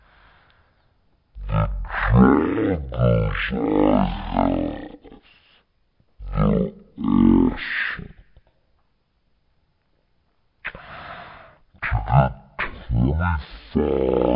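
Throughout, the audio has a wrong sample rate: samples are read out with no conversion at one third of their intended speed, which fits 48 kHz material played at 16 kHz. The speech drags, sitting 19 semitones lower, deep.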